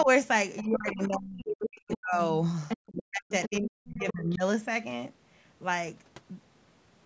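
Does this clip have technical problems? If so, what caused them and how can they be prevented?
Yes. Speech suppressed in double talk appears as a brief, slight dip at 0.04–0.08 s, then deep cuts of roughly 40 dB across 0.62–2.2 s and 2.92–4.43 s. These are likely caused by the echo canceller confusing overlapping speech with loudspeaker echo and attenuating both. On a waveform the envelope collapses in patches, and a spectrogram shows the harmonics thinning and vanishing. Preventing it takes a full-duplex canceller with better double-talk detection, or a headset.

The other side's voice leaking through occurs at 0.57–1.16 s, 1.6–1.98 s, 2.68–2.91 s, 3.29–3.59 s and 4.08–4.13 s. It ranges from faint, about 20 dB down, to nearly as loud as the main speech, likely residual echo the canceller failed to remove. A spectrogram shows a second, unrelated harmonic pattern overlaid. Headphones or better echo-path adaptation prevent it.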